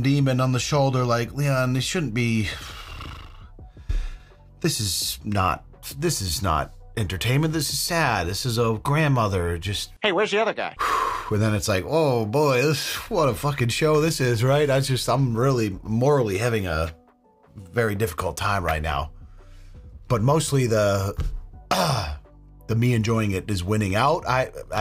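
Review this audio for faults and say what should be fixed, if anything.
No technical faults can be heard anywhere in the audio. There is nothing here that needs to be fixed.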